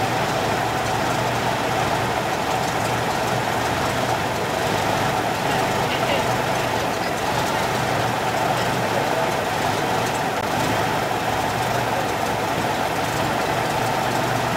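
At 10.41 s there is a block of digital silence lasting 16 ms. A run of samples has been replaced by zeros, so the sound drops to nothing and returns with no fade.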